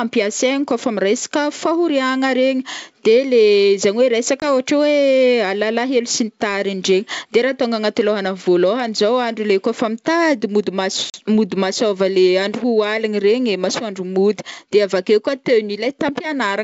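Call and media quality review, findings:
Short hard-edged dropouts at 4.40–4.45 s (20 ms lost, about one packet) and 11.10–11.16 s (40 ms, roughly two packets), each followed by a brief, slightly distorted recovery. Packet loss on an ADPCM call: the G.722 decoder's predictor and step size drift from the sender's state and take tens of milliseconds to resync.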